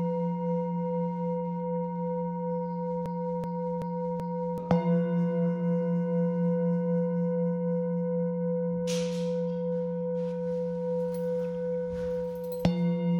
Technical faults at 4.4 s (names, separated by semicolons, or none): broken-record loop